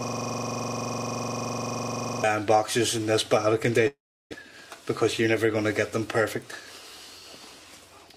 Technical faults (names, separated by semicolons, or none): system hang loop; long network dropout; jitter buffer speed-up